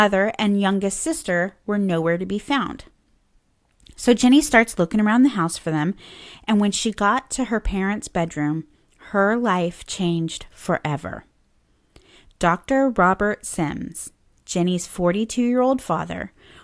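Nothing technical goes wrong anywhere in this speech recording, so there's nothing to flag from beginning to end.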